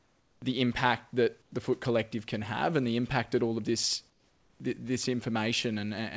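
The sender likely stopped transmitting during pauses, so the receiver inserted comfort noise in place of the background at 0.00–0.42 s, 1.42–1.52 s and, after "that all of this", 4.10–4.60 s. Each time, smoother synthetic noise replaces the room noise, about 6, 4 and 5 dB quieter.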